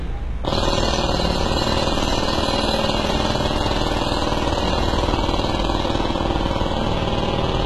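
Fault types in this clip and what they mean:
HE-AAC compression: heavy low-bitrate HE-AAC coding, likely near 16 kbps, rebuilds treble from copied lower bands, leaving a gritty, metallic top that stops at 11.8 kHz.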